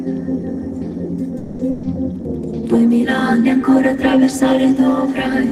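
At 1.37 s the audio stalls for about 220 ms, until 1.61 s: the last sound is stretched into a fading buzz or hiss with no true silence, then playback resumes exactly where it left off, so nothing is lost but everything after arrives about 220 ms later. That pattern is a call audio freeze, most likely packets held up in transit that drained the jitter buffer while the receiver filled the wait. Shortly after, from 1.71 to 1.85 s, a burst of packet loss removes about 120 ms of the signal. The receiver covers the hole by extending the preceding sound and attenuating it across the gap, giving a brief held, decaying tone, and when the stream picks up again it has jumped ahead, with the 120 ms in between gone rather than delayed.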